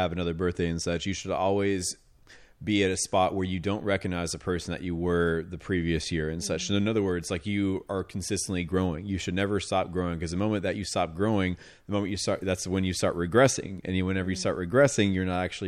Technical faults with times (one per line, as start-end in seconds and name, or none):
none